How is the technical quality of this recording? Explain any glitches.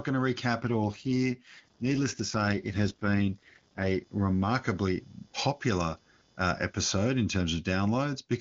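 Two faults affect the technical quality of this speech recording.

Computer activity noise runs throughout: a faint buzz, roughly 40 dB below the speech, pulsing near 500 times a second. Processor or peripheral load is modulating the audio ground.

An AMR rate drop runs from 0.60 to 4.03 s, ending just before "remarkably popular uh episode". The speech turns rough and synthetic with no gap or narrowing of the band. The network throttled the codec, which fits a fall from AMR-WB's top rate to about 8.85 kbit/s. Clarity returns once the rate recovers.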